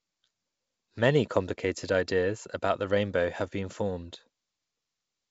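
A speech recording carried over G.722 wideband telephone coding at 64 kbit/s, with nothing technically wrong with it.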